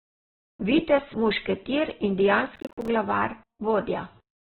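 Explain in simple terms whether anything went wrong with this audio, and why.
Two things went wrong. Throughout the speech, the sound is narrow and muffled, with nothing above about 4.3 kHz and a rough, grainy edge on the voice. That is likely heavy Opus compression, squeezed so hard that the upper frequencies were discarded.

From 2.56 to 2.88 s there is a burst of processor overload crackle. The computer repeatedly missed its deadlines for short chunks of audio, roughly 10 ms each and around fifteen of them, leaving hard-edged silent gaps that are heard as gritty tearing.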